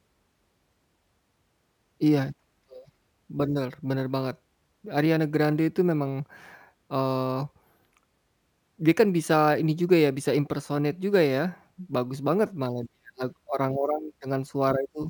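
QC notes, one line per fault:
Throughout, crude rate conversion: samples repeated without filtering, fitting a 32 kHz to 48 kHz step, leave a gritty inharmonic fizz about 30 dB under the speech.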